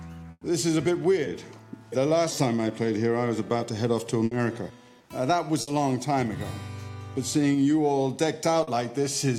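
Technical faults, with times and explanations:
0.31–0.43 s, 4.25–4.33 s and 5.61–5.69 s, burst of packet loss: Several consecutive packets arrived too late or not at all, so the receiver kept extending the last sound and turning it down. At 0.31 s about 100 ms is filled this way before a brief silence of about 20 ms. At the later two points the fill lasts about 60 ms. Each time the audio resumes further along, skipping an equal stretch of the original.
8.63–8.69 s, short concealed packet loss: A few hundredths of a second failed to reach the decoder in time. The receiver bridged the gap for about 40 ms by continuing the preceding sound and then blended back into the real signal. The result is a brief smear or wobble rather than a clean break, and the original 40 ms of material is lost.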